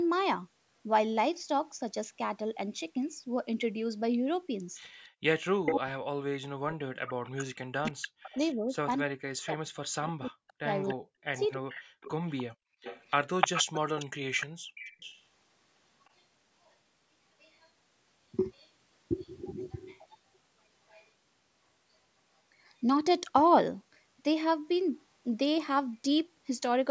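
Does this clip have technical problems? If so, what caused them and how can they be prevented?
Yes. Three faults are audible.

Echo leak: the far side was likely playing the call on a loudspeaker, and its echo canceller let part of that pickup back into the return path. A copy of the speech arrives about 0.3 s late at 5.00–5.72 s, 7.08–8.54 s, 10.49–18.69 s and 19.72–21.08 s. At first it is roughly as loud as the speech, then around 15 dB below, and faint by the last stretch. Using a headset, or a better-tuned canceller with a correct delay estimate, prevents this.

Background gated by the echo canceller: while the loudspeaker was playing, the canceller clamped the microphone hard, pulling the room sound down by about 32–33 dB. It drops out and returns at 5.09–5.23 s, 12.52–12.82 s and 14.56–14.76 s, in brief holes of roughly 0.15 to 0.3 s. Gentler suppression with comfort noise filling the gaps would keep the background steady.

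Speech suppressed in double talk: between 5.7 and 11.79 s both sides talked at once, and the canceller likely could not tell the local talker from the loudspeaker echo, so it turned both down. The speech dips and breaks up across roughly five seconds of that span, at worst by about 40 dB. A canceller with reliable double-talk detection, or a headset that removes the echo path, would prevent this.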